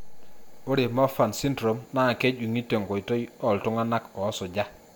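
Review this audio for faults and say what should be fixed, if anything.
Nothing here needs fixing. No technical fault can be heard anywhere in the speech.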